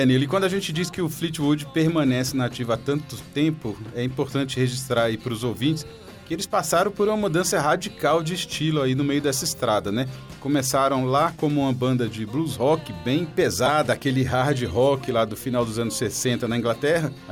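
At 13.66 to 13.68 s, a corrupt frame was decoded. Bits inside what sounds like a single compressed frame were damaged in transit or storage, yet the decoder accepted it and played it out. The misread gains and codes put energy in the wrong frequency bands for the roughly 24 ms that frame lasts, so a short, sharp chirp-like blip cuts through the sound. It peaks at about -5 dBFS.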